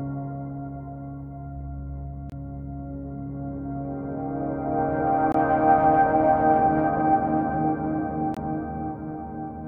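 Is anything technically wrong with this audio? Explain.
Yes. Gap between chunks at 2.30–2.32 s, 5.32–5.34 s and 8.34–8.37 s: the music arrives in 3.0 s chunks with 23 ms of silence left at each join. Nothing is lost, but the flow breaks into short holes at a steady interval.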